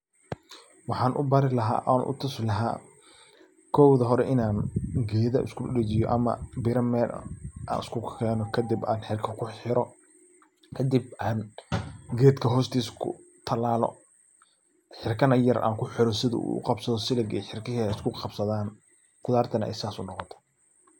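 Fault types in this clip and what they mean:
dropped buffer (overrun): At 7.83 s the speech jumps ahead as a few milliseconds of sound vanish, likely because samples were overwritten before being read. The waveform shows a sudden step with no gap, and the spectrogram shows a thin vertical broadband line.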